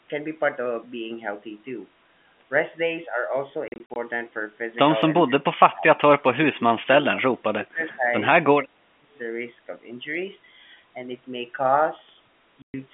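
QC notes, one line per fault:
3.68 to 3.96 s and 12.62 to 12.74 s, packet loss filled with silence: the first stretch has short dead holes scattered across about 280 ms, adding up to 140 ms, with none longer than 40 ms. The second is one solid 120 ms gap. Every hole is a multiple of 20 ms, which fits 20 ms packets. Nothing conceals them, so the speech just drops to silence with hard edges.
5.24 to 5.83 s, 6.50 to 8.07 s, 8.55 to 9.15 s, speech suppressed in double talk: in each of these stretches the talker's level sinks by around 25 to 30 dB. It is pulled down over roughly half a second in the first and third stretches and about a second in the middle one. The likely cause is the echo canceller clamping down while the far end talked over, because it couldn't separate the talker from its own loudspeaker echo. The band-limited G.711 line sound stays the same through all of it.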